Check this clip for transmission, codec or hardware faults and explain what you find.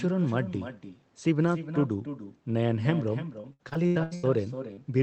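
Three faults stand out in this speech clip: an echo running through the whole call, a stretch of choppy, robotic sound, and one brief smear near the end.

Echo with no canceller, throughout: every phrase is trailed by a quieter, thinner copy about 11 dB down, arriving roughly a third of a second later. The far end's loudspeaker is feeding its microphone, and nothing subtracts that returning signal before it travels back.

Repeated packet loss (robotic sound), 3.41 to 4.25 s: the audio turns choppy, with pieces missing, with seven holes, the longest 86 ms. Nearly half of that span is synthetic fill. Packets kept missing their playout deadline, and each gap was patched by extending the previous sound.

Short concealed packet loss, 4.73 to 4.79 s: a brief wobble or smear lasting about 40 ms. That slice of the stream arrived too late to decode, so the receiver stretched the preceding audio across the hole and then blended back into the real signal.

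The limited top end, extending to about 8 kHz, matches the Opus call codec running at a modest bitrate.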